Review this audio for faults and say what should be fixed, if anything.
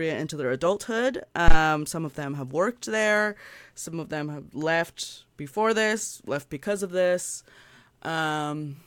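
Phantom power thump, 1.48–1.56 s: phantom power toggled on a live input sends a step through the coupling capacitors, a deep thump peaking at about -4 dBFS.

Mute the channel or pull its fader down before switching phantom power, and unmute only once the supply has settled.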